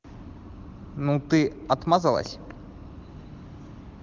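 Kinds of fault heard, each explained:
Loud pop: two sharp pops land in quick succession between 2.26 and 2.53 s, jumping roughly 10 dB above the speech, which keeps running underneath. That's likely a sudden voltage step or pulse, from a plug, switch or static discharge, getting into the signal path.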